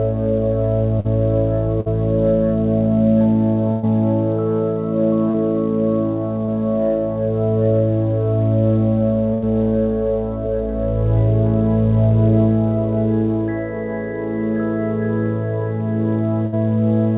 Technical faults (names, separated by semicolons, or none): short concealed packet loss; burst of packet loss